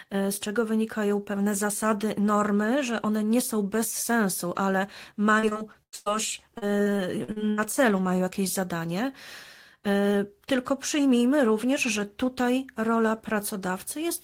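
Repeated packet loss (robotic sound) hits this speech clip from 5.39 to 6.08 s and again from 6.58 to 7.60 s. In each stretch, a rapid run of short dropouts, the longest about 96 ms in the first and 76 ms in the second, is patched by extending the preceding sound. Concealment fills about 42% of the first stretch and 24% of the second, producing a choppy texture with pieces missing.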